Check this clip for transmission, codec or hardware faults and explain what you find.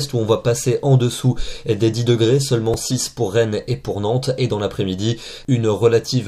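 One fault is audible: a repeated buffer at 2.74 s. A tiny block of about 2.9 ms, which fits a 128-sample buffer, was replayed twice more when fresh audio arrived late. The hard-joined repeats make a brief buzzy click rather than a silent dropout, and no audio appears to be lost.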